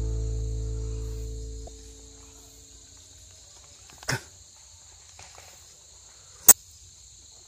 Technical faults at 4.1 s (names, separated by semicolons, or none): damaged data in a compressed stream